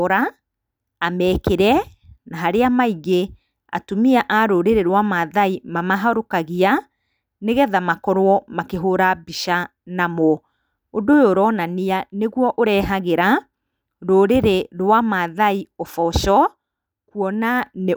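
No technical faults turn up anywhere in the recording.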